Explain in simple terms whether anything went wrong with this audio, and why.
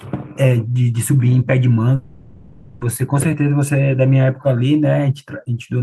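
Something did go wrong. From about 1.95 to 2.83 s the speech breaks off and a fading buzzy hiss fills the gap, which points to a likely long network dropout. Nearly a second of audio never arrived, and the speech resumes with that stretch lost.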